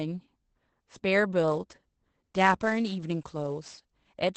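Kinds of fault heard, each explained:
Opus voice compression: Running through the whole clip, the speech passes through Opus in its SILK linear-prediction mode, coding a wideband signal in 20 ms frames at a rate that sounds like about 12 kbps. The coarse excitation coding makes the damage plainly audible: the speech is muffled, hoarse and slightly robotic. A spectrogram shows a hard ceiling at 8 kHz, with nothing above it, and harmonics that look smeared and blotchy from frame to frame.
sample clock jitter: From 1.49 s to 4.20 s the converter's clock wanders, so each sample lands slightly early or late at random. The timing error is on the order of 10 microseconds, and it adds a rough hiss around 25 dB below the signal. Because the error scales with waveform slope, the hiss swells on loud, bright sounds and disappears in pauses. A spectrogram shows broadband noise that follows the speech energy, strongest where high frequencies are.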